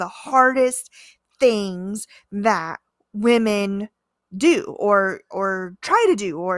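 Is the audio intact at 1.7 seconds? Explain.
Yes, at 1.7 seconds the speech runs through cleanly, with no dropout, click, distortion or other audible fault at that moment.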